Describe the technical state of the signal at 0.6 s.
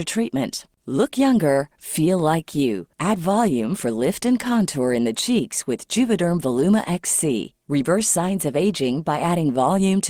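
The audio is intact at 0.6 s, with no fault present at that moment.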